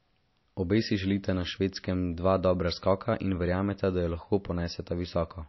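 Throughout the speech, the sound is band-limited with nothing above 5.8 kHz and carries a plainly audible watery, swirling texture, likely from MP3 compression at a low bitrate near 28 kbps. Starved of bits, the encoder drops the treble and lets weak frequency lines flicker between frames.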